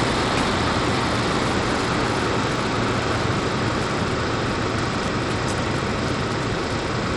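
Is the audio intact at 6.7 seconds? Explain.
No. Bluetooth SBC compression runs through the whole clip, 6.7 s included: the likely starved bit pool leaves nothing above 11.9 kHz, with flickering treble and gritty quantisation noise.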